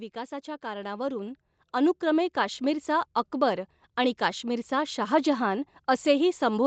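Automatic gain rising runs from 0.12 to 2.93 s in this speech clip: the gain control judged the incoming level too low and stepped its gain up gradually, by about 8 dB, so the voice and the background noise swell together rather than the voice alone getting louder. The level settles just before "अकबर आणि काश्मिरचा शाहजहान". The call path's band limit leaves nothing above 8 kHz, which fits a low-bitrate Opus stream.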